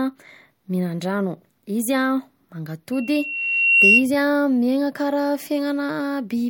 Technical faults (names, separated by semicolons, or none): loudspeaker feedback squeal